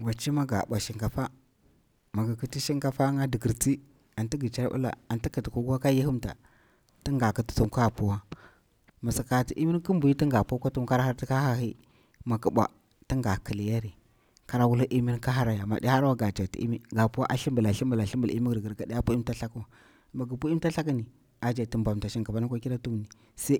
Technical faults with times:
none

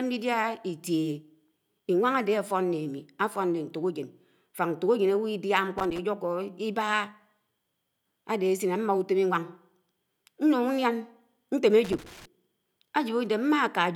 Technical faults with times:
5.78-5.98 loose connector crackle
11.84-12.25 loose connector crackle

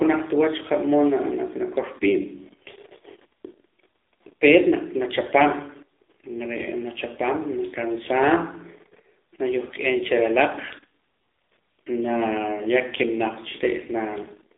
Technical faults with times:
0.00-14.58 AMR narrowband mobile codec

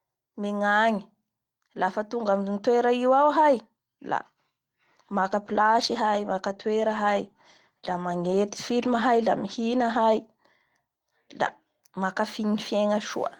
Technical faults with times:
5.12-10.33 call bitrate drop

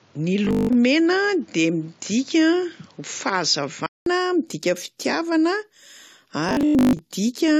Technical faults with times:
0.00-4.06 input switched to a poorer device
0.45-0.75 robotic sound from repeated short buffers
6.49-6.99 robotic sound from repeated short buffers

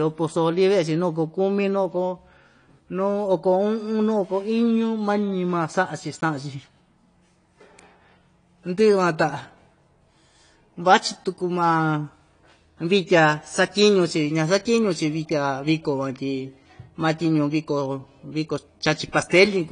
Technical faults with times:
0.00-19.72 AAC compression

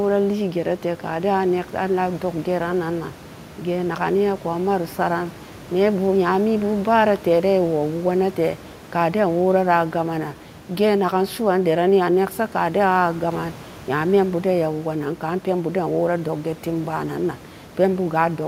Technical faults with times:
none

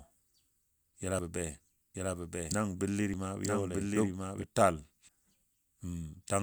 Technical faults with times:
1.19 audio missing between chunks
1.95-4.44 doubled audio track
3.14 audio missing between chunks
5.09 audio missing between chunks

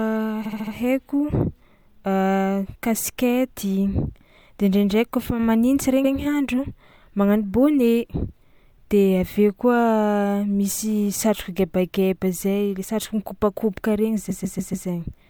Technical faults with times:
0.45-0.73 repeated frames
6.04-6.13 repeated frames
14.29-14.87 repeated frames

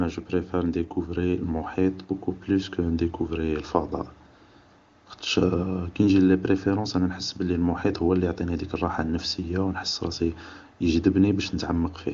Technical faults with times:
none

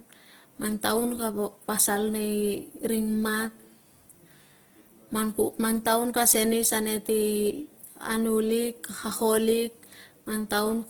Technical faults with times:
0.00-10.90 Opus compression

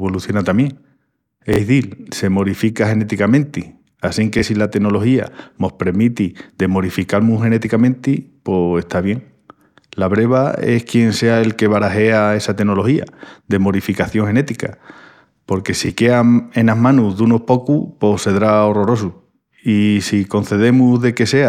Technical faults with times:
1.53-1.60 Bluetooth stutter
4.39-4.43 Bluetooth stutter
15.86-15.90 Bluetooth stutter

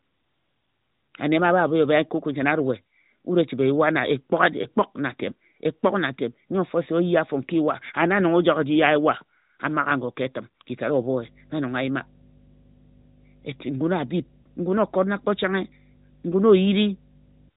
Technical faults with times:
4.62-4.67 lost AMR speech frames
11.20-17.49 mains hum
14.42-14.46 lost AMR speech frames

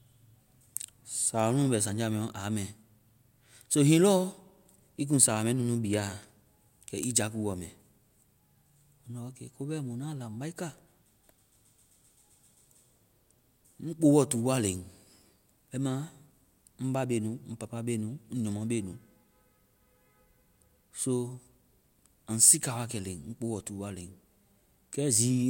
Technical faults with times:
none

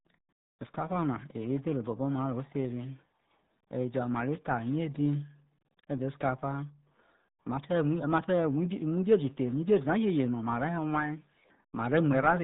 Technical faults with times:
0.00-12.44 RealAudio 14.4 codec

